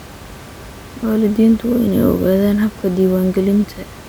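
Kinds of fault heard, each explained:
No technical faults are present.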